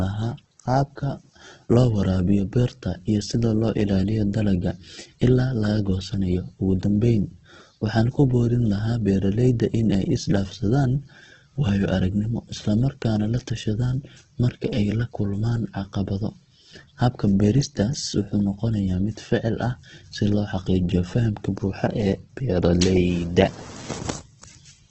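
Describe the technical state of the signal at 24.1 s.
Opus compression affects 24.1 s as it does the whole clip. Nothing remains above 8.2 kHz, and the speech sounds rough and grainy, likely from Opus music-mode band filling at a starved bitrate near 12 kbps.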